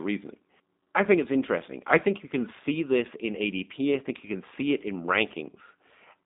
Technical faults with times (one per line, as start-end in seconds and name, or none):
0.00-6.25 G.729 codec